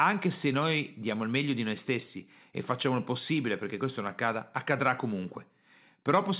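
Speech, with no technical faults.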